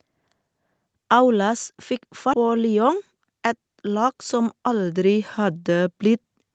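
Speech, carried over a call path whose audio stops at 8 kHz, as a wideband Opus-style codec would do. At 2.33 to 2.35 s there is a skip ahead: roughly 0.4 s of speech is missing, and the two sides are spliced with no silence or concealment filling the join. That sets it apart from a dropout, which leaves an audible hole. Here the speech simply lurches forward, likely because a backed-up jitter buffer discarded audio to catch up. From 3.82 s to 6.30 s the level climbs by about 4 dB as automatic gain rising takes effect. The control judged the input too quiet and raised its gain step by step. The background noise swells along with the speech. A talker moving closer would lift the speech but leave the noise floor where it was.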